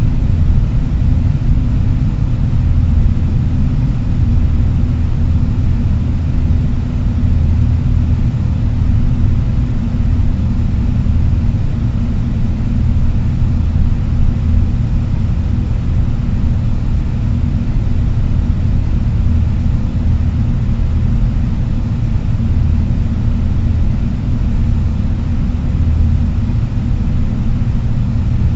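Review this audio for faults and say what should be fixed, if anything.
Nothing to fix: the audio shows the expected signature of a WebRTC call path, with no content above 8 kHz, which fits a wideband codec such as G.722 at 64 kbps, and no faults are audible.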